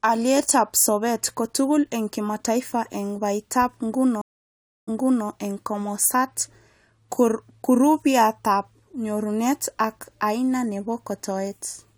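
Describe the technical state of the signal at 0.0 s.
At 0.0 s the signal is intact, with no fault audible in the speech at that moment.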